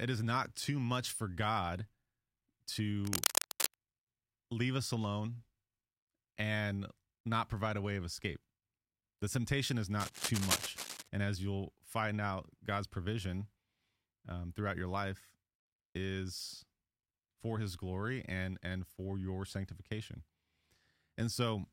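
From 3.05 to 3.74 s and again from 10.00 to 11.08 s, just after "temptation is", cable scratch noise appears as dense, uneven rustling, likely from a worn connector. It sits roughly level with the speech at first and somewhat quieter later, and these irregular bursts differ from isolated clicks.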